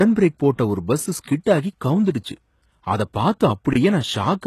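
Speech, around 4 seconds, with two problems. Throughout, the codec damage is plainly audible and nothing reaches above 12.3 kHz. The treble has the rebuilt quality you get when only the lower band is actually coded and the top is recreated by copying lower bands upward under a coarse envelope, so the upper harmonics don't line up with the ones below. That points to HE-AAC compression as the likely cause, at a bitrate that fits something around 16 kbps. Separately, there's a gap between chunks from 3.73 to 3.75 s, a hole of about 21 ms where the sound just stops and then picks up again without anything missing. It fits audio handled in 2.0 s chunks with silence left at the join, from codec padding or from a player starting the next chunk late.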